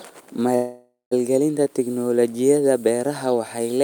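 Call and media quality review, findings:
Call audio freeze, 0.55–1.13 s: speech stalls into a fading buzz, 180 ms silence, resumes intact 560 ms late. Likely jitter buffer underrun, receiver concealment extending last frame. Spectrogram: smeared repeating band tapering to blank; waveform decaying to flat.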